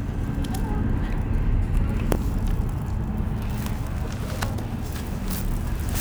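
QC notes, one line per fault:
3.15 to 6.00 s, periodic clock jitter: the converter clock is wobbling at around 1 kHz, smearing sidebands either side of everything, so highs turn rough and metallic.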